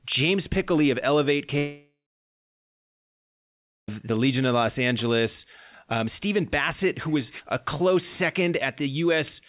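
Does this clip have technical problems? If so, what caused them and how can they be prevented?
Yes. From 1.58 to 3.89 s there is a long network dropout, likely from lost packets. The last sound is stretched into a fading buzz, about 1.9 s of silence follows, and the speech resumes with roughly 2.3 s missing. Preventing it means securing a stable connection with enough bandwidth headroom and enabling forward error correction or redundancy for the call stream.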